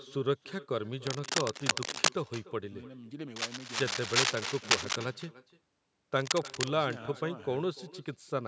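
From the first syllable to the last, every phrase is trailed by a faint double arriving roughly a third of a second later and sitting about 20 dB below the speech. This is echo with no canceller. The far end is playing the call through a loudspeaker, its microphone picks that playback up again, and nothing strips it out, so the speech returns after the network round trip as a thinner shadow of itself.

At 1.07 to 2.10 s, again at 3.36 to 4.96 s, and briefly at 6.16 to 6.73 s, a harsh, ragged scratching and rustling breaks over the speech at roughly the same loudness as the speech. This is cable scratch noise. Its likely cause is a worn cable, connector or control being moved, so that its contact resistance jumps around rapidly and injects dense, uneven bursts of noise. Beneath both faults, the call microphone processing trims the lowest bass, and nothing reaches above 8 kHz.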